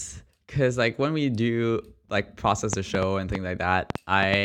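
Speech with a train of clicks from 2.73 to 4.35 s. About seven sharp ticks arrive irregularly, roughly four per second, standing well above the speech. Likely interference or a faulty connection.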